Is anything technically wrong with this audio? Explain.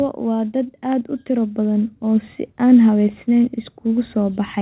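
Yes. From 0.24 s to the end at about 4.6 s, automatic gain rising is audible. The gain control judged the input too quiet and kept pushing its gain up. Speech and background noise swell together, steadily louder across the clip. The audio also carries call-codec coding noise and has nothing above 4 kHz, which fits G.711 mu-law narrowband telephony.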